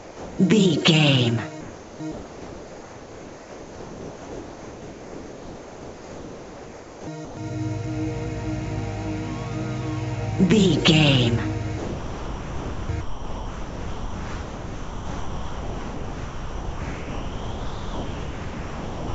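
A voice detector at the sending end has likely mistaken the sound for background and stopped transmitting, so the receiver filled the gaps with generated comfort noise. This sound dropped by the voice detector occurs at 0.00–0.38 s, 1.61–2.00 s, 2.12–7.07 s, 7.25–7.37 s, 11.78–12.89 s and from 13.01 s to the end. Each time, the sound, band-limited to 8 kHz by the G.722 call path, gives way to steady noise or near silence, then returns when the detector reopens, except after the last gap, which runs to the end.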